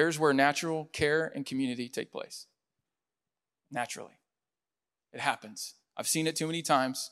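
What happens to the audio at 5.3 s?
At 5.3 s the speech carries on intact, with no fault heard at that moment.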